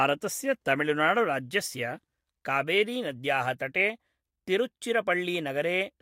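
At 0.60 s the speech jumps forward by roughly 70 ms, a few whole frames of the compressed stream that were never decoded. Unlike a dropout, no silence fills the gap.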